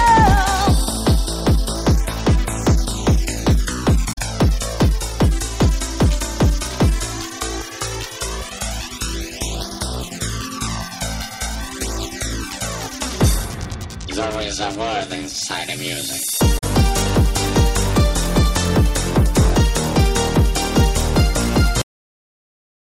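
At 4.09 to 4.18 s and again at 16.55 to 16.64 s, damaged data in the compressed stream makes the decoder misread frames and lose sync while it hunts for the next valid header. Each leaves a brief chirp or squawk, about 90 ms long, in place of the sound. At 21.82 s the final buffers were never written out, giving a cut-off end: the audio stops in the middle of a sound and drops straight to digital silence with no decay.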